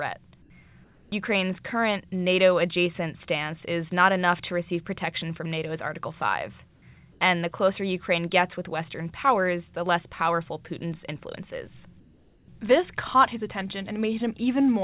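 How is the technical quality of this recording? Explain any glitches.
The speech comes through a narrowband call path with nothing above 4 kHz, which fits G.711, and the background is replaced by comfort noise in four pauses: 0.42–0.50 s, 0.84–1.12 s, 7.12–7.20 s and 12.00–12.48 s (after "influence is"). In each, the real background gives way to smoother, featureless noise about 4 dB quieter (about 2 dB at 12.00 s), likely because the sender's discontinuous transmission stopped during silence and the receiver synthesised filler. Unlike a dropout or noise gate, the gap never goes silent.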